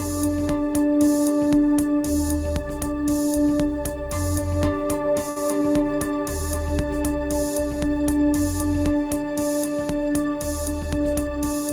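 At 5.29 s the sound briefly hangs: whatever was playing is held a little too long, for about 68 ms, with a faint buzzy, slightly flattened quality before it moves on at 5.38 s. Nothing is skipped. This is a short stall from a late packet. The packet was due but hadn't arrived, the jitter buffer ran dry, and the receiver stretched the last audio to bridge the gap, then resumed where it left off, now running about 68 ms later.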